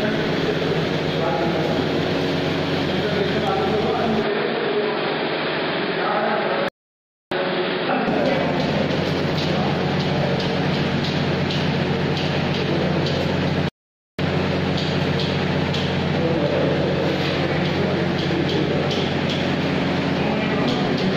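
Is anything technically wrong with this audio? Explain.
Yes, there are two kinds of fault.

From 4.23 to 8.07 s, the input likely switched to a poorer device. Only a narrower band gets through, so the sound turns dull and boxy without a gap at the change. A new noise floor sits about 35 dB below the signal, the level stays roughly the same, and the full band returns at 8.07 s.

There are also two playback stalls, most likely from the player running out of buffered data. The output drops to silence for 630 ms from 6.69 to 7.32 s, and again for 500 ms from 13.69 to 14.19 s. Each time, the sound cuts off mid-flow and then carries on.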